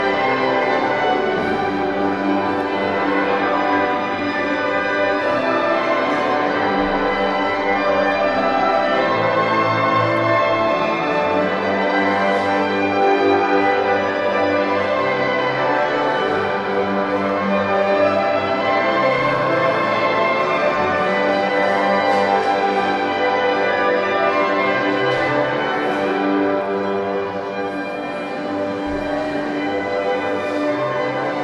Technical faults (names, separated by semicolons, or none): none